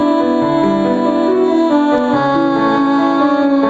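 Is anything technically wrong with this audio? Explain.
Yes. Gain pumping runs through the whole clip. The gain swings by roughly 5 dB. Loud and soft parts sit too close in level, so everything feels squashed. The likely cause is input gain set far too high, with a fast limiter or compressor clamping down on every peak. Nothing reaches above 8 kHz, which fits a call codec path at that bandwidth.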